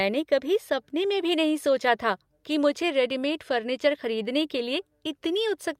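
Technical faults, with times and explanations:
No technical faults can be heard in this speech recording.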